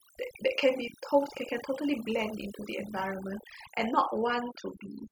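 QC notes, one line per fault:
Throughout: overdone noise removal, lowered background that breaks up into twinkling specks, because an overly strong noise reducer switched off bands near its noise estimate.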